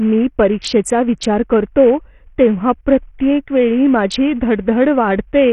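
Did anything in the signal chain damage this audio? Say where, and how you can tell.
Yes, at the codec stage. Throughout, nothing survives above 12 kHz and the treble flickers under gritty grain, likely heavy Bluetooth SBC compression rather than a clean, steady low-pass filter.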